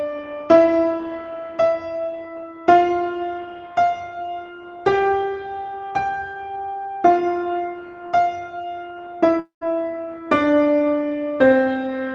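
At 9.39 to 9.63 s a fading buzz gives way to silence, likely a long network dropout. Unlike a brief packet-loss glitch, it goes fully quiet.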